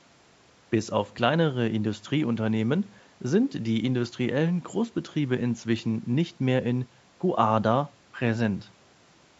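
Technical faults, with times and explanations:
No technical faults can be heard in this speech clip. The call microphone processing leaves nothing above 8 kHz, and the room noise stays about 36 dB below the speech.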